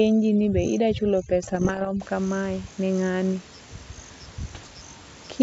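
From 0.0 to 2.0 s, overdone noise removal cuts bands near its noise estimate too deeply, leaving near-silent background with twinkling specks until "kamae ni ng'ani". Bit errors on an ADPCM link, at roughly one and 0.7 percent, upset the decoder's step size and predictor from 1.43 to 1.89 s and 4.54 to 4.67 s, ringing on as pops and rough bursts with brief level jumps.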